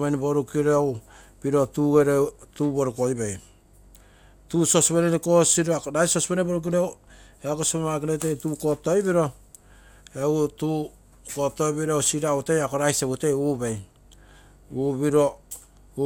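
At 2.28 s the speech breaks into DAB burbling until 2.45 s: short blips of noise in single sub-bands. Weak reception let bit errors of a fraction of a percent slip past error correction, corrupting samples across what sounds like several MP2 frames. A second, much briefer burst of the same fault lands at 6.67 s, from a lower error rate.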